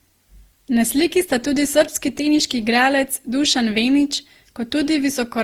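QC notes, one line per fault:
throughout: generation loss, a swirly, hollow, smeared sound with blurred attacks. Each requantisation on a shifted frame grid compounds the noise, likely from around seven passes through a roughly 48 kbit/s Opus-like codec.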